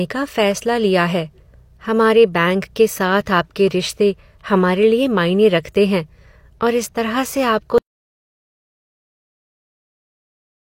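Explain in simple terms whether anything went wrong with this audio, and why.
Audio dropout to silence begins at 7.78 s and lasts until the clip ends. The speech stops abruptly mid-flow, and what follows is not a quiet room but total silence, with no background hiss or room sound at all. That points to the input signal being cut off, most likely by a device disconnecting, a link failing or a mute being switched on, while the recording carried on storing nothing but silence. Anything said after 7.78 s is lost.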